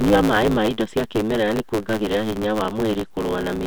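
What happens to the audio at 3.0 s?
At 3.0 s the Bluetooth SBC bit pool drop is under way, from 2.00 to 3.11 s. Link congestion forced the phone to cut the bits per frame, so the highest sub-bands are starved and the rest quantised coarsely. The treble dulls and gritty noise rises, which fits a fall from about bit pool 28 to 13, near 102 kbps.

Underneath, throughout the clip, is a block size mismatch (truncated). One stage writes longer blocks than the next reads, which fits 512-sample writes, and each block's tail is discarded. That leaves a 109 Hz buzz, with the speech running 1.16 times fast with its timbre kept.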